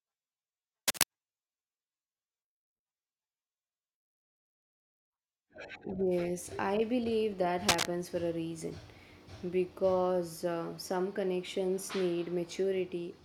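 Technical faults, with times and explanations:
0.88 to 1.04 s and 7.68 to 7.86 s (just after "I believe that"): cable scratch noise, dense irregular crackling sitting a few decibels above the speech, likely from a worn cable or connector being moved; on a spectrogram, broadband vertical smears; on the waveform, jagged uneven spikes.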